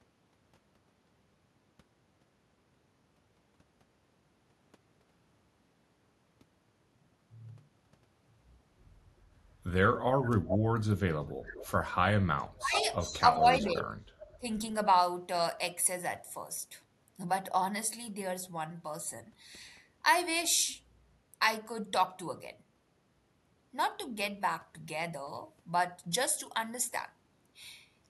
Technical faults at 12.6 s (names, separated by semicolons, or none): echo leak; speech suppressed in double talk